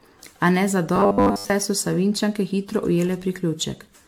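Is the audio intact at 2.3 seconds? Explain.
No. Generation loss runs through the whole clip, including 2.3 s: the speech was likely decoded and re-encoded around seven times through a lossy codec, each pass requantising on a shifted frame grid. The result is swirly, hollow, smeared speech with blurred onsets, consistent with repeated AAC-LC at about 96 kbit/s.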